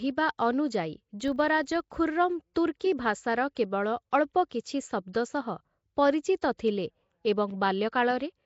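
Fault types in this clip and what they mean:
Nellymoser compression, throughout: the speech carries a rough, hissy halo and a smeared, underwater quality. This likely comes from the Nellymoser Asao codec at a rate that fits 32 kbps, which fills starved bands with noise.
Filter restarted on every block, 1.2 to 2.04 s: a buzz at 25 Hz rides along with the speech level. Each block's filter starts again from silence, so every block opens with a small transient, and these repeat at the block rate.
Pre-echo, at 2.54, 2.80, 3.55 and 5.13 s: a short hiss of 11 to 17 ms comes just before sharp attacks, which then sound softened. The codec spreads quantisation noise across the whole block, so noise sized for the attack fills the quiet moment before it.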